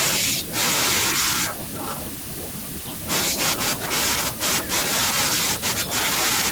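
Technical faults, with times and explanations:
Nothing stood out as a technical problem on listening to this speech recording.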